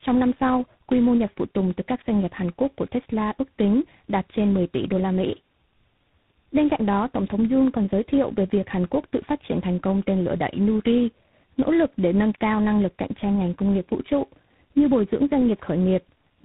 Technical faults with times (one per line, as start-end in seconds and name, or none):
0.00-16.44 tandem speech coding